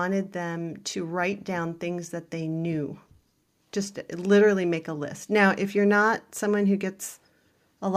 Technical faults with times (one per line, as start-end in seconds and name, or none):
none